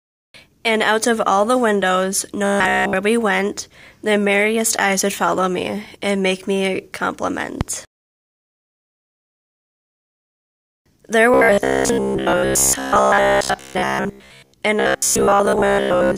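From 2.45 to 2.95 s, 11.34 to 14.54 s and 14.80 to 16.18 s there is robotic sound from repeated short buffers. It's likely that a roughly 15 ms chunk is being replayed in place of most of the real audio. This locks the sound into a rigid, metallic 66.8 Hz buzz.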